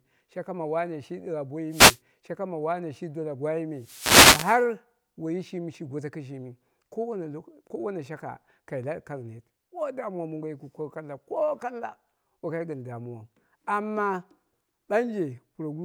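The analogue FM radio link fades as reflected paths cancel, so receiver noise surges through this speech as a wireless microphone noise hit: a brief static swish from 1.70 to 2.00 s, then a longer burst from 3.77 to 4.69 s, after "me shi dola" and before "woiyi shimi shi goto".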